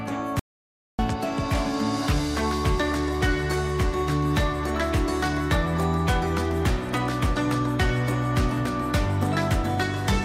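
At 0.39 s the sound stops dead and stays in complete silence until 0.99 s, with no room tone or background hiss underneath, then resumes abruptly mid-flow. About 0.59 s of material is simply missing. This is an audio dropout to silence: the input signal was likely lost for that stretch, through a momentary disconnection, a failed link or an accidental mute, while the recorder kept writing silence in its place.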